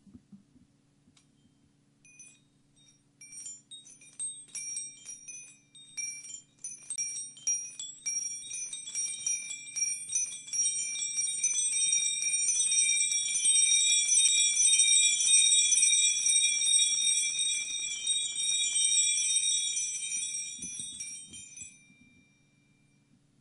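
The laser jumped to another turn of the disc's spiral, a CD skip, at 6.96 to 6.98 s and again at 14.28 s. Each time playback mutes briefly, for about 20 ms and then a few milliseconds, before resuming from a different point.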